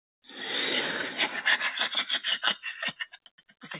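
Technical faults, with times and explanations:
throughout: noise suppressor applied to music or sounds. A speech-tuned suppressor treats held tones and ambience as noise, so levels sag and recover by around 5 dB, making the sound pump. On a spectrogram, sustained bands flicker in strength while onsets stay bright, all capped at 4 kHz by the narrowband call codec.
0.00–0.24 s: comfort noise in place of the background. For these 240 ms, the real background, about 66 dB below the loudest sound, gives way to smooth, featureless hiss about 17 dB quieter, likely synthetic noise generated while transmission paused. The waveform shows a flat, even noise floor; the spectrogram shows a uniform, detail-free wash.
3.01–3.65 s: sound cut by the noise suppressor. The suppressor misjudged this sound as noise and pulled it down by up to about 18 dB over roughly half a second, so it sinks in level. The waveform envelope shrinks; spectrogram energy dims.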